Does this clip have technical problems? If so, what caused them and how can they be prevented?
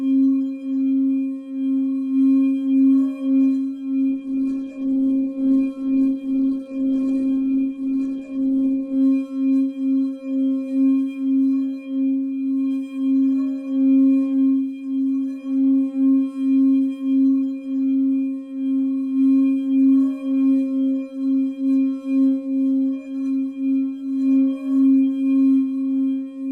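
Yes. A call bitrate drop runs from 4.1 s to 9.07 s. Top end narrows from 20 kHz to 12 kHz and the audio turns coarse, which fits the encoder falling from roughly 96 kbps to 12 kbps after a collapsed bandwidth estimate. Prevent it by stabilising the network path and setting a higher minimum encoder bitrate.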